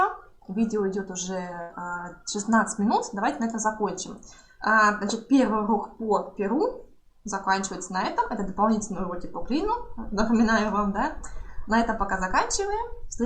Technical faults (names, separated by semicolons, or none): burst of packet loss